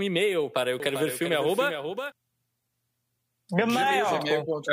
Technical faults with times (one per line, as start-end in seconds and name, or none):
0.80-2.12 doubled audio track